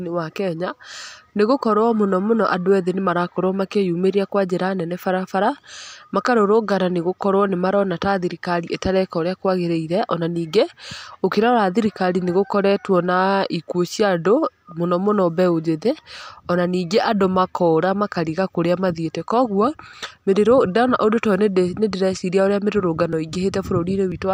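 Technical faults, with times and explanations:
23.13 to 24.12 s, periodic USB or driver dropouts: near the end of the speech, about three brief ticks land at an even spacing of 0.50 s. Each time, something blocking the USB bus or audio driver at a fixed interval makes a few milliseconds of audio go missing. That portion is skipped rather than replaced by silence, so the waveform jumps abruptly and clicks. Because the losses follow a fixed schedule, the clicks keep a steady, regular beat.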